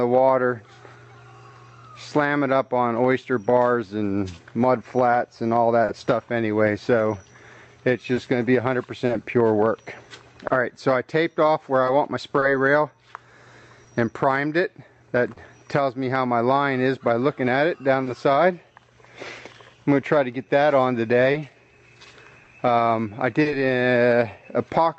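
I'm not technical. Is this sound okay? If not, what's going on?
No. The device sending this sound had a clock running about two percent slower than the receiving device's clock. This is called clock drift between sender and receiver. Because of it, the receiver kept running slightly short of sound to play and had to make up the difference all the way through.

The receiver made up that shortfall with repeated timing corrections from 0.2 s to 24.95 s. It slipped in tiny extra slices of sound, about a fifth of a second in total, so playback ran at about 99% speed. You may hear a slightly unsteady pace or faint hiccups.

There are two short stalls from a late packet, at 5.85 s and 18.03 s. In each case a piece of sound arrived late, so the receiver held the last sound for 30 ms until it showed up. Nothing is lost, but a sound lingers briefly, sometimes with a slight buzz.

Scattered short gaps appear between 8.1 and 15.4 s (about seven) and between 21.3 and 23.5 s (about three). 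Small pieces arrived late, and each hole, none longer than about 30 ms, was patched by stretching the preceding sound. These come through as brief ticks or smears.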